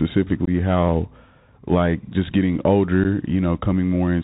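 Speech carried over a Bluetooth CVSD headset codec, plainly audible throughout: nothing passes above 4 kHz, a granular hiss sits under the speech, and s sounds turn scratchy where loud high content outruns the adapting step size of the 64 kbps one-bit delta coding. That grainy texture sets it apart from a cleaner telephone-band filter. Unconcealed Bluetooth headset packet loss punches two abrupt holes, around 0.45 to 0.49 s (about 19 ms of audio lost, a handful of packets) and at 3.04 s just after "like just getting" (about 11 ms). Each has hard edges and a brief level dip on recovery, unlike the smoothed-over gaps of concealed loss.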